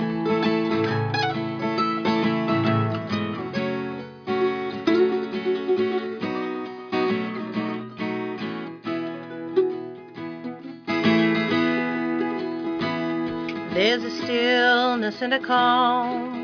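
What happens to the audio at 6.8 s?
Nothing goes wrong at 6.8 s; the audio plays through that moment intact, with no dropout, click, glitch or other fault.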